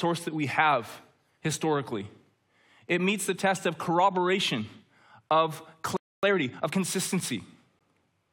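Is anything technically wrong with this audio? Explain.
Yes, there are three faults.

A playback stall most likely starved the player of data, or blocked its thread, from 5.97 to 6.23 s. The speech cuts out mid-flow and stays silent for about 260 ms before resuming where it stopped.

Time-compressed catch-up follows from 6.23 to 6.75 s. To clear the backlog, the player drops small slices and cross-fades across them, running at 1.5 times normal speed. The speech sounds hurried but keeps its pitch.

A gap between stream segments occurs at 7.79 s. Mismatched time stamps where two segments meet leave a 16.6 ms hole, which the player fills with silence. The result is a hard-edged dropout with nothing lost, consistent with 4-second segments.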